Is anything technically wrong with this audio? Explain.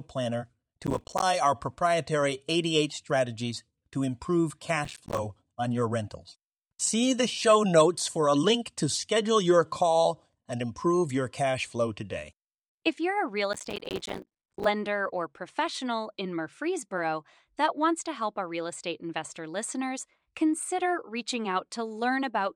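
Yes. There is processor overload crackle at 0.83–1.23 s (before "our proprietary"), 4.85–5.19 s (between "strategies to improve" and "on your rentals"), and 13.53–14.65 s (between "you're a real" and "or professional in"). Dozens of roughly 5 ms buffers miss their deadlines and drop to silence, producing gritty, hard-edged tearing.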